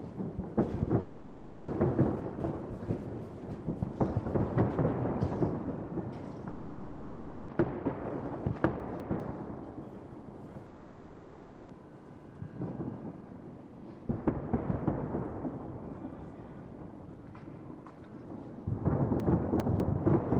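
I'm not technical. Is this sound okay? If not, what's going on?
No, it isn't. There are two kinds of problem. At 1.0 to 1.7 s, 6.5 to 7.5 s and 10.7 to 11.7 s you get a long network dropout: the audio likely stopped arriving, so the player stretches the last bit into a fading buzz or hiss, then jumps ahead with that stretch missing.

The second is chunks out of order, at 2.2 to 2.6 s, 8.8 to 9.2 s and 19.2 to 19.8 s. A fifth-of-a-second piece plays late, after the piece that should follow it (two pieces late in the last case), so the sound briefly jumbles.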